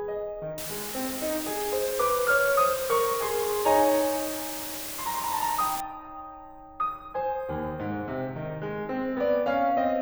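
Music clip, and from 0.58 to 5.80 s there's a steady, even hiss with no distortion, roughly 10 dB under the music. That's low bit depth with dither, consistent with about 5 bits.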